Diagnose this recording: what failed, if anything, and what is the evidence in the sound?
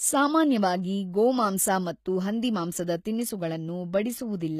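The failure sits at the codec stage and runs through the whole speech clip: the treble sounds bright but synthetic, with s sounds turning gritty and lispy, and nothing survives above 14.9 kHz. That points to likely HE-AAC compression at a low rate, around 20 kbps, where spectral band replication copies lower bands upward under a coarse envelope. Unlike a plain low-pass or ordinary lossy coding, the treble is present but mismatched, its harmonics failing to line up across the crossover.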